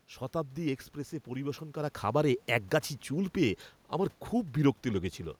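Speech recording with no technical faults; the audible room noise belongs to the recorded space, and the level shift around a second and a half is the talker moving relative to the microphone.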